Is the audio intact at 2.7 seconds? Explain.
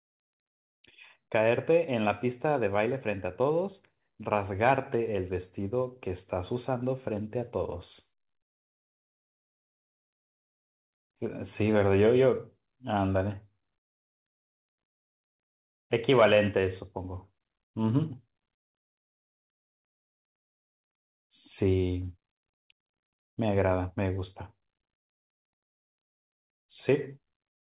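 Yes, the audio is intact at 2.7 seconds, with the speech passing cleanly through the WebRTC call path, whose G.711 mu-law coding leaves nothing above 4 kHz.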